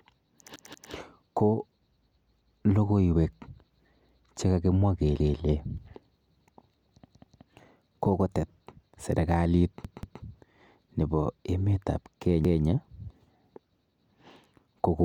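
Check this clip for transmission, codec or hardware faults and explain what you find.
The speech has a repeated buffer fault, heard five times: 0.56–0.93 s, 5.20–5.39 s, 7.06–7.43 s just before "kokotet serikalit", 9.85–10.22 s just after "kokotet serikalit", and 12.45–12.63 s after "nebo emet ap". Each time, fresh audio failed to arrive, so playback reused the last 0.19 s chunk, which fits an 8192-sample buffer. That chunk plays two extra times in the first, third and fourth events and once in the second and fifth. The result is an audible stutter with hard joins, and essentially no audio is lost.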